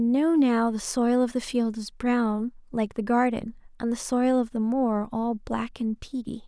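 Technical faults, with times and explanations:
No technical faults can be heard in the clip.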